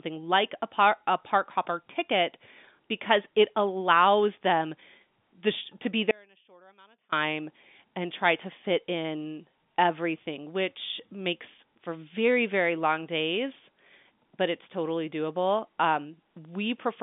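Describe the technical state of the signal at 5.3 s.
At 5.3 s the signal is intact, carrying only the ordinary G.711 telephone coding, with its narrow band that passes nothing above about 3.8 kHz.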